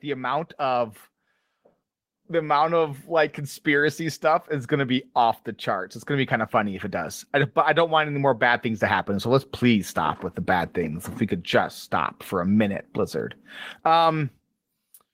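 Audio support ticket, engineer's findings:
Automatic gain rising, 0.05–1.0 s: speech and background swell together by about 4 dB. AGC stage judged input too quiet, ramped gain up gradually.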